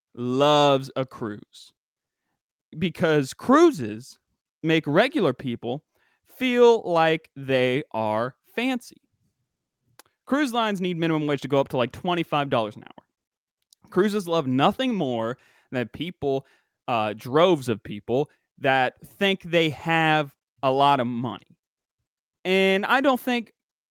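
Nothing in this speech recording stands out as a technical fault; the audio carries on from beginning to end without any glitch or break to flag.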